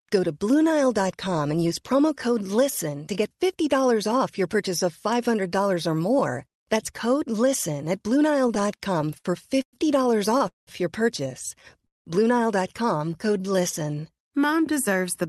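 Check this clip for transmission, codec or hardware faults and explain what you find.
There's a run of network-timing trouble in the second half of the clip, all of it jitter-buffer related. Nothing actually goes missing.

Repeated stalls (stutter), 8.39 to 9.26 s: ten quick hiccups, the longest about 61 ms. Packets kept showing up late, so the buffer kept running dry and the last sound got stretched each time. It comes across as a choppy, dragging stutter.

Call audio freeze, at 9.62 to 9.75 s, at 10.48 to 10.69 s just before "your purchase", and at 11.86 to 12.07 s right after "your purchase": the sound briefly smears out, then drops to silence for roughly 80 to 170 ms before carrying on. It's likely packets held up in transit, leaving the buffer empty and inserting a gap.

Jitter buffer slow-down, 12.98 to 14.17 s: the receiver repeated tiny slices to rebuild its reserve. Playback runs at about 89% speed, adding 135 ms, with the pitch unchanged but the sounds drawn out.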